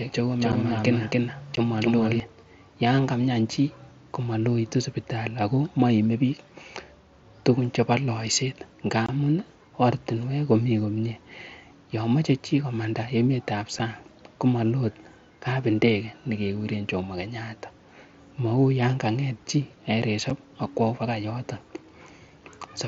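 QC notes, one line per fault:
0.00–2.2 s, doubled audio track: the speech is already running with a second full-band copy about 300 ms behind at roughly the same level. It's dry, with no decay or room colour, and cuts off abruptly at 2.2 s. That's likely a slower second capture path or two out-of-step copies in an edit.
0.52, 1.56, 9.06–9.09, 13.79 and 20.30 s, unconcealed Bluetooth headset packet loss: short hard-edged holes of 7.5, 15, 22.5, 7.5 and 7.5 ms, which can click. The gaps line up with dropping one to three 7.5 ms headset packets, with silence or an idle pattern left in their place. The mSBC wideband link around them carries the speech with only light codec damage.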